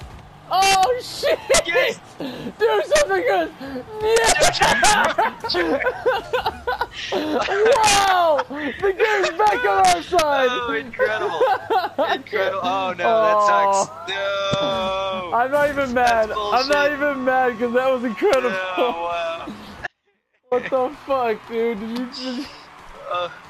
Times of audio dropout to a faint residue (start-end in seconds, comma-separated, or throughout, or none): 19.87-20.51